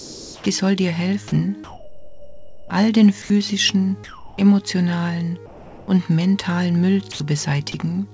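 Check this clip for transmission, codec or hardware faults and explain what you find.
The clip shows discontinuous-transmission faults from a voice detector. The audio is band-limited with nothing above 8 kHz, which fits a G.722 call path at around 64 kbps.

Comfort noise in place of the background appears five times: 0 to 0.46 s, 1.64 to 2.70 s, 3.22 to 3.30 s, 4.04 to 4.38 s and 5.46 to 5.88 s. The sender likely stopped transmitting when it judged these pauses empty. The receiver then filled them with synthetic noise of the right rough colour. The real background, about 18 to 25 dB below the loud passages, becomes a flat, textureless hiss. It is about 2 to 8 dB quieter, and the drop is most obvious across the long gap at 1.64 s.

An onset clipped by the voice detector occurs at 0.41 to 0.46 s. The detector was likely slow to recognise that sound had resumed, so the first 50 ms never left the sender, and the receiver kept playing comfort noise through that stretch. 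The sound enters abruptly, its soft attack missing, popping straight out of the synthetic hiss instead of building up from the background.

Sound dropped by the voice detector occurs at 7.12 to 7.20 s. Here the detector likely mistook real sound for background and halted transmission for 80 ms, losing about 50 ms of actual sound. Comfort noise fills the hole, so the sound briefly thins into steady hiss and then snaps back once the detector triggers again.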